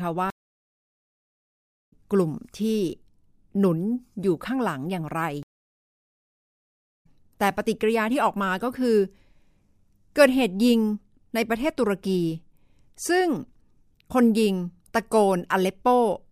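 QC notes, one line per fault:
0.30–1.93 s and 5.43–7.06 s, stream reconnect: both times the connection drops and the audio goes silent for about 1.6 s. When the player reconnects, it starts a fresh decoder partway into a live stream, so the speech picks up around 1.5 s and 2 s further on, leaving a jump in the content.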